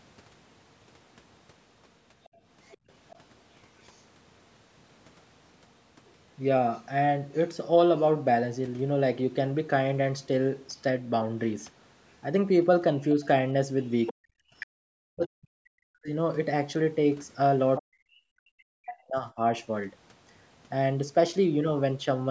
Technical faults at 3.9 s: other side's voice leaking through

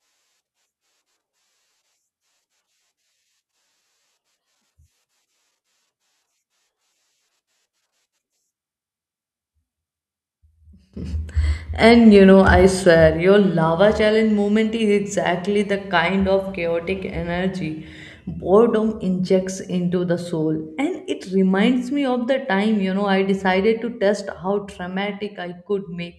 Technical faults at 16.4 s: none

